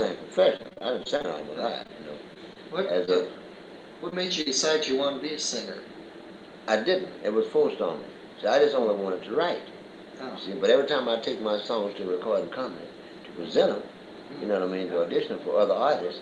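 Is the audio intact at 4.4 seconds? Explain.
No. Short concealed packet loss hits from 4.41 to 4.48 s. About 40 ms of audio never reached the decoder in time, so the receiver extended the preceding sound to fill the gap before blending back into the real signal, leaving a brief smeared patch.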